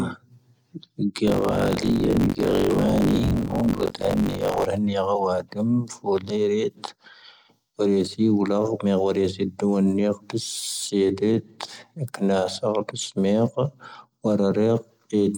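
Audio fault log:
1.26 to 4.67 s, buffer tearing: The speech takes on a robotic rattle at about 47 Hz. The writer and the playback reader have drifted out of step inside a circular buffer. In each period, somewhere near two fifths of the audio is stale, around 40 ms older than its neighbours. Hard joins sit on both sides of it. Those splices repeat once per buffer, which fits a 1024-sample buffer. The rattle rides only on the speech itself.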